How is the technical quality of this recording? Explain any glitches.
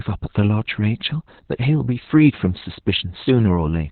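Technical quality is poor: heavy Opus voice compression runs through the whole recording, from start to finish. Nothing survives above about 4.2 kHz, so the speech sounds muffled, hoarse and faintly robotic. That fits the codec's SILK linear-prediction mode squeezed to narrowband at roughly 8 kbps, which models the voice coarsely in short frames, probably 20 ms. On a spectrogram, energy stops at a flat ceiling near 4.2 kHz, and the harmonics below look smeared and blotchy.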